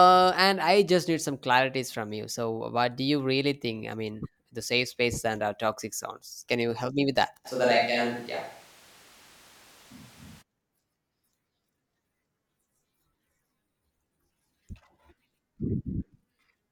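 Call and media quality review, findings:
Speech turns roomy and hollow, bass thinned, 7.47–10.40 s; abrupt change in and back out. Level roughly unchanged, room noise about 30 dB below speech. Switch to a distant microphone, likely close-mic dropout with fallback to farther capture device.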